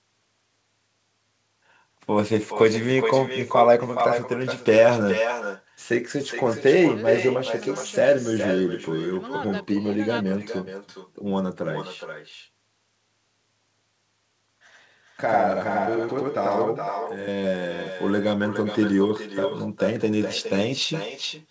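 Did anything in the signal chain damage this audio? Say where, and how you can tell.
Yes. Throughout the speech, every phrase returns as a quieter, thinner copy about 8 dB down, roughly 0.4 s later: echo with no canceller. The far end's loudspeaker feeds its microphone during call processing.

From 14.43 to 17.28 s, the speech doubles into a same-level slap 93 ms behind. This channel delay (doubling) at the driver or buffer stage fits a 4096-sample buffer.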